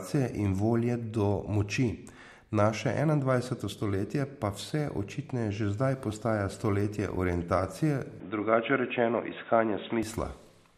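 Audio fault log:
8.20–10.03 s, input switched to a poorer device: the recording likely jumped to a narrower-band input, cutting everything above 3.8 kHz, so the speech turns dull and boxy with no gap or level jump, carrying a new noise floor well below the signal.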